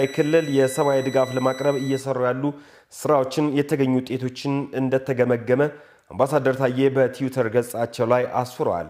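Switching supply whistle from 0.0 to 2.0 s: a power converter running in audible burst mode or beating with another supply leaks a thin, high whistle near 2 kHz, drifting between roughly 1.95 and 1.99 kHz, sitting about 20 dB below the programme.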